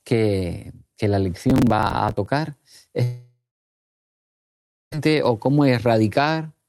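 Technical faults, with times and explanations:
1.50–2.26 s, processor overload crackle: Right after "que la", the speech breaks into a gritty, tearing crackle for about three quarters of a second. The processor could not finish its small buffers on time, and each missed one was skipped rather than filled, so the audio jumps ahead with a hard edge each time. The pattern fits around thirty missed buffers of roughly 5 ms each. A spectrogram shows a dense comb of thin vertical broadband lines across this span, and the waveform shows many abrupt step discontinuities.
3.04–4.96 s, long network dropout: The speech stops and the last sound smears into a buzzy, hiss-like continuation that fades away. About 1.5 s of near-silence follows. When the speech returns it has skipped ahead, with roughly a second of material gone. This is likely a long network outage in which no packets arrived while the receiver tried to conceal the gap. 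On a spectrogram the harmonics blur into a decaying smear and then give way to an empty band. The waveform tapers to a flat line before the speech resumes abruptly.
5.06–6.69 s, jitter buffer speed-up: After the dropout, the speech runs noticeably hurried, about 11% faster, yet its pitch stays the same. Extra delay had built up, and the receiver worked it off by repeatedly cutting out short pieces of one or a few pitch periods, roughly 200 ms in total. On a spectrogram the harmonics stay at the same heights while syllables and pauses look compressed in time. The waveform shows small, closely spaced splice points where periods were removed.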